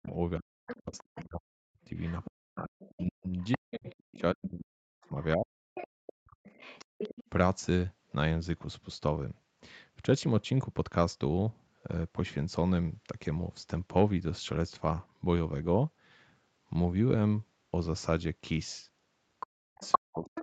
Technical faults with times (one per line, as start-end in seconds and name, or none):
0.00-6.45 speech suppressed in double talk
0.69-1.25 other side's voice leaking through
1.83-4.21 other side's voice leaking through
5.23-5.87 other side's voice leaking through
6.46-7.29 other side's voice leaking through
6.85-6.98 background gated by the echo canceller
19.40-20.42 other side's voice leaking through
19.45-20.42 speech suppressed in double talk